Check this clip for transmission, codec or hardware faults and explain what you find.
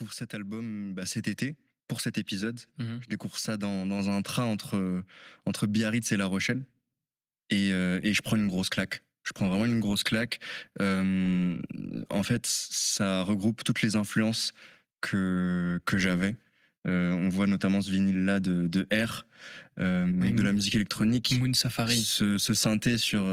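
The speech has one hardware-side fault, repeated three times: microphone volume stepped up, at 1.02 s after "cet album", at 3.99 s after "mhm je découvre ça", and at 5.01 s after "un train entre". Each time the call software judged the input too quiet and raised the device's input gain in a single step. The voice and the background jump together by about 6 dB, then about 3 dB, then about 1 dB, with the second jump landing before "un train entre entre".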